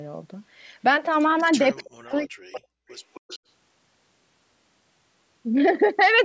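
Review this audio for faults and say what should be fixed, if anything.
Speech suppressed in double talk runs from 1.74 to 2.62 s, with about 0.7 s of that span affected. The level dips by as much as about 40 dB, likely because the echo canceller could not tell this talker from loudspeaker echo while both sides spoke at once, so it attenuated everything. On a waveform the envelope collapses in patches. A spectrogram shows the energy, especially the upper bands, thinning or vanishing in blocks. Full-duplex tuning with gentler suppression during double talk would keep the talker audible.

Echo leak appears at 1.76–1.83 s, 2.55–2.60 s and 2.89–3.39 s as a copy of the voice delayed by 268 ms. It sits about 25 dB below the speech in the first two scraps and about 20 dB below in the last, longer one, likely because a loudspeaker endpoint's canceller left residual echo. A spectrogram shows faint repeated harmonic patterns trailing the originals, and the waveform shows a low shadow after the speech bursts. 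A headset, or better echo-path modelling on the far end, would prevent it.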